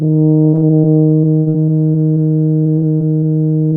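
Packets of this music stream were lost or arrived too late again and again from 0.49 to 2.18 s: over a dozen holes, the longest about 70 ms, with the receiver concealing roughly a fifth of that span. The same repeated packet loss returns from 2.64 to 3.34 s with a handful of shorter holes up to 32 ms, about 17% concealed. Each hole is patched by extending the preceding sound, so both stretches turn choppy and robotic, with fragments of the music missing.

At 3.69 to 3.73 s a single short concealed packet loss occurs. About 20 ms of audio failed to reach the decoder in time, and the receiver bridged it by continuing the last sound before blending back into the real signal. It is heard as a brief smear or wobble just before the clip ends.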